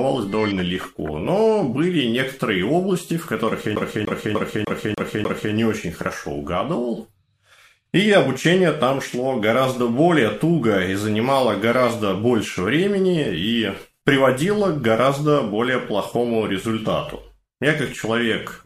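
A CD stuck on one turn from 3.76 to 5.54 s: a scratch keeps throwing the laser back, replaying the same 0.30 s of audio six times with short mutes.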